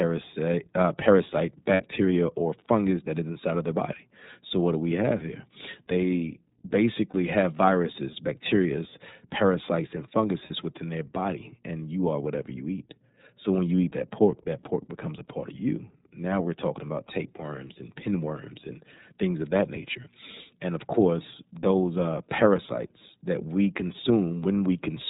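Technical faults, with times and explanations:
throughout, iLBC codec: everything above 4 kHz is gone, and the speech has that slightly rough, synthetic edge of excitation coded one chunk at a time. The damage is plainly audible, and it fits iLBC's 13.33 kbps mode with 30 ms frames.
1.74–1.83 s, 7.10–7.14 s and 10.46–10.51 s, lost iLBC frames: each gap turns into a short held, faintly buzzy vowel as the decoder repeats the last pitch cycle with noise. They run about 60, 30 and 30 ms, which fits two frames and then single frames lost, and the voice recovers almost instantly.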